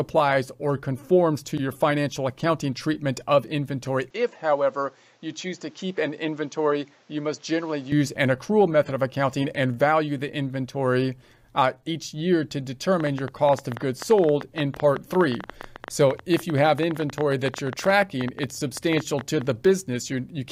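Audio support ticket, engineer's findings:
4.10–7.92 s: sound turns dull and boxy, nothing above 7.8 kHz, level drops a few dB, new background noise well below the signal, no gap at either transition. Likely input switched to a poorer device, narrower band and its own noise floor.

13.00–19.42 s: ticking and popping over the sound and in pauses, about 11.4 clicks per second, uneven spacing, some seventy in all, peaks slightly louder than the sound. Train of clicks, likely interference or a faulty connection injecting repeated pulses.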